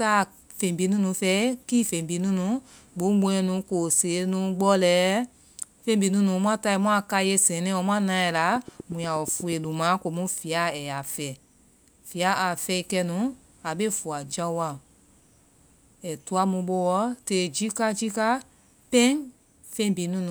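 From 8.56 to 9.65 s there's a train of clicks, about ten evenly spaced pops at roughly 8.3 per second, peaking about 5 dB above the speech. They tick right through the gaps too, likely interference from nearby gear or a faulty connection or power supply.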